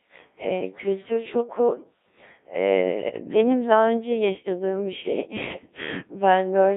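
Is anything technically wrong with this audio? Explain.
Yes, there are two faults.

The whole recording has passed through a Codec 2 vocoder. The sound suggests Codec 2 running at about 1.3 kbit/s. It transmits only pitch, voicing, energy and a coarse spectral envelope, so the decoder rebuilds the speech from sine waves instead of keeping the original waveform. The damage is heavy. The voice sounds robotic and buzzy, its natural texture is lost, and the band is limited to roughly 250 Hz to 3.7 kHz, which gives a thin, radio-like tone.

From 1.73 to 1.84 s there are bit errors on digital voice radio. Flipped bits, at a rate of a few percent, corrupted the parameters the vocoder uses to rebuild each frame. The affected stretch fits about three frames. Because each bit controls the pitch, level or spectral shape of a whole frame, the voice briefly jumps in pitch and loudness and changes tone colour. 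For about a tenth of a second it breaks into a warbling, garbled burst.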